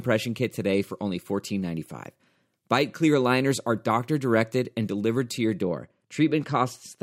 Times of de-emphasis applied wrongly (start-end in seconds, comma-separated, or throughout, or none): 5.62-7.02